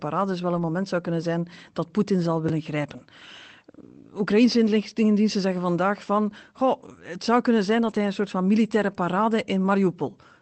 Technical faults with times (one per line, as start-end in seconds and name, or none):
0.55-0.61 lost packet rebuilt from error correction
2.49 repeated buffer
7.83-7.97 lost packet rebuilt from error correction